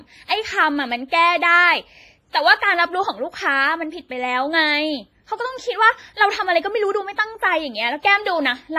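Across the whole speech recording there is heavy codec damage, likely from WMA compression: a ringing, washy quality with hiss that swells and fades along with the signal, and nothing above 15.5 kHz. The thinness points to a low bitrate, which fits about 24 kbps. Unlike broadband noise or hiss from a recording chain, this texture is tied to the signal itself, and the upper band stops sharply rather than rolling off gently as with a lowpass filter.

Pre-echo appears three times: from 1.08 to 1.12 s, spreading about 36 ms; from 2.31 to 2.34 s, about 35 ms; and from 8.02 to 8.04 s, about 20 ms. Each time a sharp attack sits late in a transform block, so the quantisation noise sized for the loud onset also fills the quiet gap just before it. A short hiss leads each attack, which then sounds soft and smeared. Reverb or echo trails after a sound, while this arrives ahead of it.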